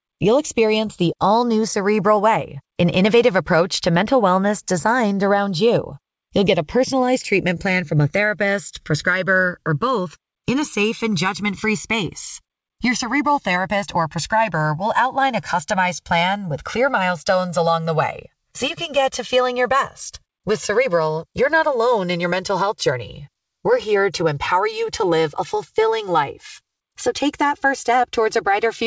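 From the very start, the two channels are drifting apart: they're clocked separately, off by around 100 ppm, so the gap between them creeps up to roughly 3 ms by the end. Fold it to mono and you get a slow, sweeping flange as the comb notches glide through the spectrum.

Also running the whole way is clock drift between sender and receiver, with the sender's clock going about 4% fast. The receiver's jitter buffer keeps overfilling, so it has to keep shedding little bits of audio to catch up, which shows up as small, irregular timing hiccups.

Those repeated timing corrections run from 0.14 s to 28.4 s, trimming toward 104% speed. Every edit goes the same way but lands at uneven spacing, so if heard at all it comes across as slight hiccups or a somewhat unsteady tempo. Underneath it all, the call codec's band limit caps everything at 8 kHz, which fits G.722.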